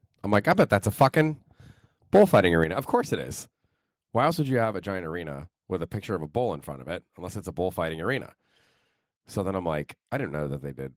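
From 1.01 to 1.21 s and again from 2.14 to 2.40 s, microphone overload flattens the loudest peaks into a harsh crackle, likely from input gain driving about 4 to 5 dB past the converter's limit. A few percent of samples sit squared off against the converter's limit, with broadband smearing on a spectrogram. At 2.64 s the microphone volume steps down by about 7 dB, and at 4.65 s by about 3 dB more, likely the call software cutting the input level. The whole waveform envelope, background included, drops abruptly each time.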